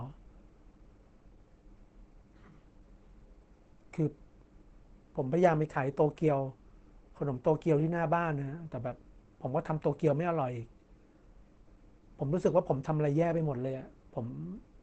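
From start to finish, the speech sounds muffled and hoarse, with nothing above about 8.7 kHz, likely from Opus compression in its speech-oriented mode at a rate around 16 kbps.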